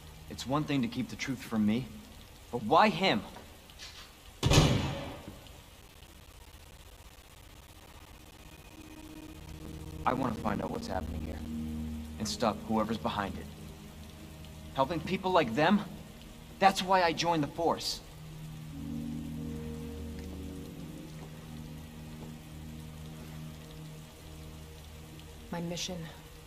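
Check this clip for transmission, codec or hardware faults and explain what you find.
One hardware fault is present: periodic USB or driver dropouts from 5.82 to 11.46 s. Every 64 ms a background task stalls the bus or driver, and roughly 10 ms of audio is replaced by silence, about a hundred times, producing a steady ticking. The waveform shows evenly spaced flat gaps, and the spectrogram shows thin vertical broadband lines at the same spacing.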